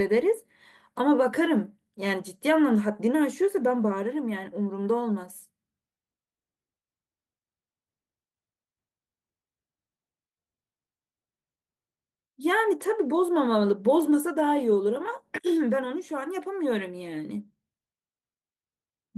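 No technical faults are audible in the speech, and the Opus voice compression leaves only light coding damage, consistent with a fullband hybrid setting around 24 kbps.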